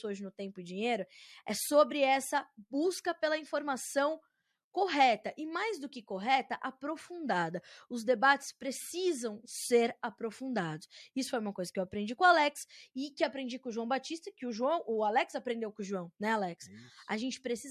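No technical faults can be heard in this speech recording.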